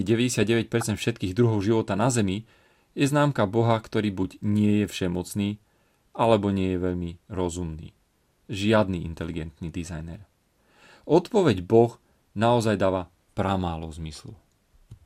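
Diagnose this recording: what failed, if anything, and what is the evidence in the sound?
DAB burbling at 0.81 s, right before "všetkých druhov života na": a brief watery blip, suggesting a couple of corrupted MP2 frames from weak reception letting roughly 0.1 percent bit errors through. Spectrogram shows isolated sub-band blocks of noise; the waveform shows a short irregular blip.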